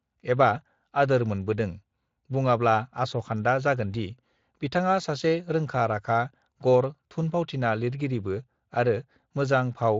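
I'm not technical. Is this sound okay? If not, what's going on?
Yes, no faults are audible in this speech recording.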